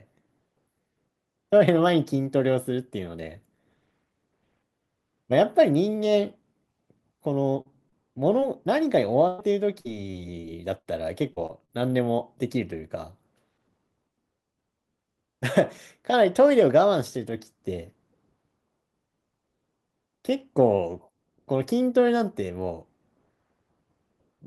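At 7.61 to 7.67 s, 7.89 to 7.94 s and 8.40 to 8.43 s the speech has three cases of short concealed packet loss. Each time, a few tens of milliseconds of the stream arrived too late or not at all. The longest hole was about 40 ms. The decoder patched each gap by extending the preceding sound and then blending back. Each one is heard as a quick smear or wobble in the speech.

From 9.27 to 11.71 s there is repeated packet loss, heard as robotic sound. The audio drops out eight times across this stretch, losing about 340 ms in total. The longest gap is 111 ms. Each hole is filled by stretching the last sound before real audio returns, and the next gap follows soon after. About 14 percent of the stretch is patched, so the speech turns choppy, with pieces missing.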